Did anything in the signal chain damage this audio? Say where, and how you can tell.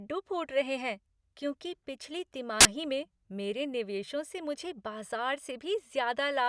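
Yes. At the storage stage, file tags were played as audio from 2.61 to 2.65 s, between "रहे हैं क्योंकि पिछली" and "में मेरे निवेशों से". Compressed cover-picture bytes read as samples give very loud white noise: a solid waveform block and a hard-edged broadband spectrogram stripe.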